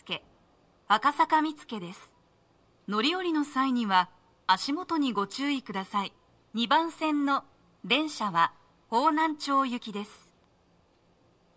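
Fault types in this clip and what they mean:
Nothing here to flag: I couldn't hear any technical fault anywhere in the audio.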